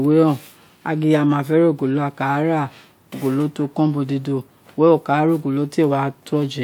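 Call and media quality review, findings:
Nothing stood out on listening to the speech recording.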